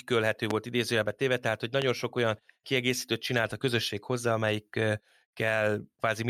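A sharp pop jumps out of the speech at 0.51 to 0.53 s, and another one at 1.82 to 1.85 s. Each is a single click peaking about 15 dB above the speech, which continues unbroken underneath. This is a loud pop, most likely caused by a sudden voltage step or spike, from a switch, static discharge or a driver glitch, entering the signal path and being shaped by the circuitry that follows.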